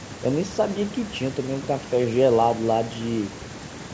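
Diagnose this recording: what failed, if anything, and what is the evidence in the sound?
Nothing failed; the speech passes through without faults.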